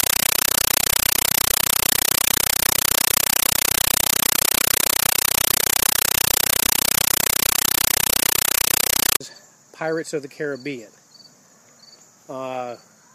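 From 0.0 to 9.2 s, a compressed stream played as audio: undecoded Dolby Digital, consistent with 384 kbps AC-3, heard as loud chattering static. The waveform shows 8 ms noise bursts 31.25 times a second between near-silent gaps; the spectrogram shows broadband vertical stripes.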